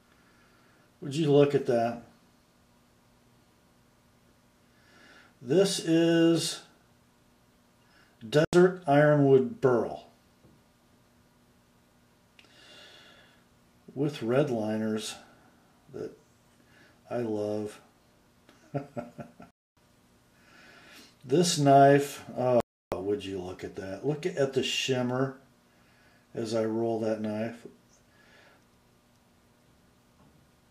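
At 8.45 s, 19.51 s and 22.60 s the sound cuts to silence for 82 ms, 262 ms and 316 ms, then resumes. This is likely a Bluetooth stall, where held-up packets drained the headphone buffer. The waveform shows flat gaps and the spectrogram shows blank vertical bands.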